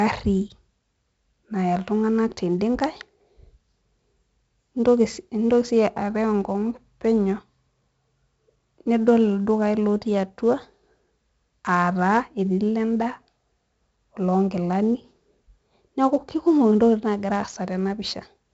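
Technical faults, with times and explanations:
Throughout, 4-bit ADPCM compression. Each sample is stored as a coarse 4-bit step from a prediction. The error is gritty hiss that swells on loud speech. Sharp onsets distort as the step lags behind. The damage is heavy. Nothing sounds above 7.7 kHz, which fits a 16 kHz sample rate.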